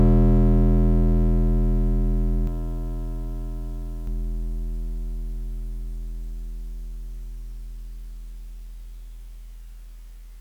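A slower second path or misaligned edit likely mixed in a doubled audio track from 2.47 to 4.07 s: a dry copy about 5 dB quieter, trailing by roughly half a second, starting and stopping abruptly.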